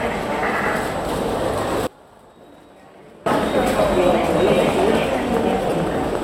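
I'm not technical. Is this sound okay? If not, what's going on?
No. Between 1.87 and 3.26 s the signal was lost for about 1.4 seconds while the playback path stayed live. This is an audio dropout to a faint residue: the sound cuts off abruptly, and only a faint trace remains until it snaps back.

Lost LE Audio frames occur twice. The Bluetooth link dropped brief chunks of data, and the decoder patched each gap by reusing the last stretch of sound with its detail scrambled. Around 3.77 to 3.79 s, about 15 ms goes missing. Between 5.64 and 5.72 s, about 37.5 ms is lost in short bursts. Each spot sounds like a tiny noisy smear.

From 4.07 to 6.16 s there is a train of clicks, likely from electrical interference or a faulty connection or power supply. About ten sharp clicks, roughly five per second at an uneven pace, tick loudly over the sound.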